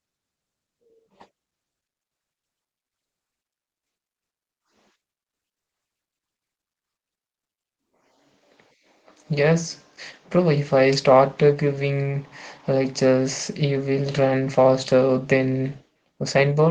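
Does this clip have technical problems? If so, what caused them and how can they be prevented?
Yes. Throughout, the speech sounds muffled, hoarse and slightly robotic: Opus voice compression in hybrid mode, coarsely coding the excitation at a bitrate around 16 kbps. Encoding at a higher bitrate would prevent this.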